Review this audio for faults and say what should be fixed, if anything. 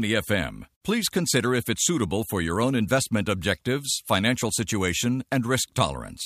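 No faults can be heard in this speech recording. Nothing needs to be fixed.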